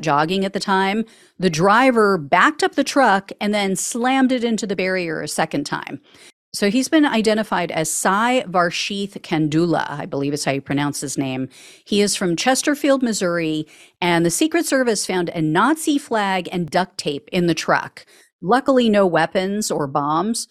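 Overlap between stream segments at 2.77, 4.75, 6.72, 10.71, 14.70, 16.68 and 18.68 s: segment time stamps overlap, so the player discards 5 to 17 milliseconds of genuine speech, and the resulting waveform jump is heard as a tiny skip, falling on boundaries of the 2 s segments.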